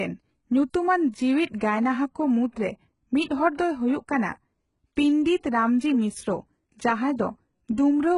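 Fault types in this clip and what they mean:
HE-AAC compression: throughout, with heavy damage; the treble, likely rebuilt from lower bands at a bitrate near 12 kbps, sounds synthetic, with nothing above 11.1 kHz.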